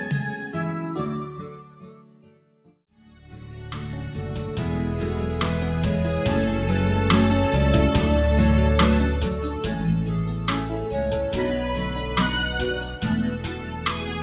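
A noise suppressor applied to music or sounds stays active for the whole clip. It treats held tones, ambience and tails as noise, so the level swings by around 10 dB. Attacks pass, sustained parts sink, and the sound pumps and thins. Sound cut by the noise suppressor shows up four times: 1.53 to 2.75 s, down about 9 dB; 2.92 to 3.18 s, down about 7 dB; 9.32 to 11.17 s, down about 9 dB; and 12.76 s to the end, down about 9 dB. Steady passages drop away and decays end early. The band stops at 4 kHz, which points to a G.711 mu-law call path at 64 kbps.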